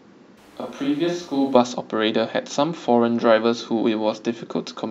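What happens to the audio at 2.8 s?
Nothing goes wrong at 2.8 s; the speech there is intact and continues without any dropout, click or distortion.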